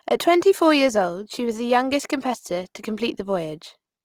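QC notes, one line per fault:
Throughout: Opus compression, speech sounds rough and grainy, tones turned noisy; likely Opus music-mode band filling at a low bitrate, consistent with 24 kbps.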